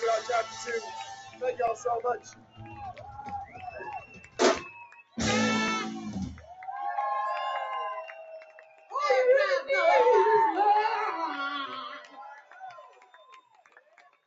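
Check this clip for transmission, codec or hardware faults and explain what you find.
Three faults are present. A speech noise suppressor works on the whole clip, cuts several stretches hard, and chunk overlaps stutter at regular joins.

Noise suppressor applied to music or sounds: This runs throughout. The suppressor expects speech. It treats held tones and decays as noise and pulls them down, while attacks pass. Level swings by around 15 dB, so the sound pumps and thins.

Sound cut by the noise suppressor: There are deep dips at 1.07–1.42 s (about 11 dB), 2.19–3.26 s (about 14 dB), 3.45–3.80 s (about 9 dB), 3.98–4.39 s (about 13 dB), 4.87–5.18 s (about 14 dB), 8.41–8.93 s (about 14 dB), and from 12.01 s to the end (about 14 dB). Sustained material sinks and tails are clipped short.

Overlapping chunks: Stutters fall at 1.68, 5.68, 9.69 and 13.70 s, about 4 s apart. Each chunk starts 6.5 ms before the previous one ends. 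That sliver plays twice, giving a brief click or hiccup at each join. The call microphone path has an 8 kHz upper limit, but it is not a fault.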